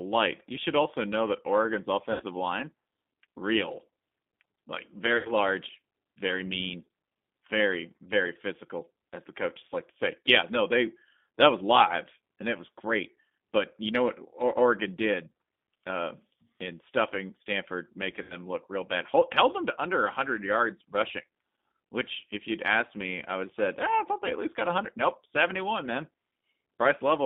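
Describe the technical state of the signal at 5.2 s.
At 5.2 s the audio is inside a dropout handled by VoIP packet loss concealment, from 5.17 to 5.33 s. About 80 ms of audio went missing, which fits four lost 20 ms packets. The decoder filled the gap by repeating its last pitch and vocal tract filter with falling gain. The speech smears into a fading buzzy tone or coloured noise. It sounds weak for a short time after the packets return.

Underneath this is the G.729 codec, running at 8 kbit/s across the whole clip. The speech is rebuilt from a filter, a pitch predictor and a few pulses per frame. Sound is confined to about 200 Hz to 3.6 kHz. The coding damage is plainly audible as a rough, synthetic edge.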